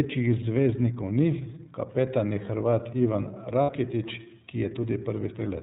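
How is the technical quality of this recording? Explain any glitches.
The recording is noticeably degraded by narrowband coding and has one brief dropout.

The iLBC codec affects the whole clip. Nothing above 4 kHz survives, and the speech sounds plainly rough and synthetic, which fits iLBC at about 13 kbps with 30 ms frames. Unlike plain low-pass filtering, which only dulls the sound, this coarsens the voice's texture itself.

Lost iLBC frames occur from 3.62 to 3.70 s, about 60 ms, which fits two dropped 30 ms packets. The decoder fills the gap by repeating the last pitch cycle mixed with noise, so it sounds like a brief buzzy held vowel rather than silence or a click. Speech recovers immediately afterwards.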